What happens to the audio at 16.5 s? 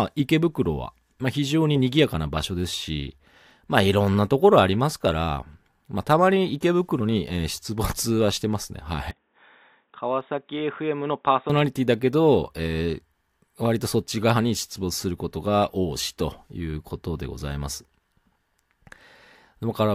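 Nothing goes wrong at 16.5 s; the speech there plays through intact, with no dropout, click or distortion to be heard.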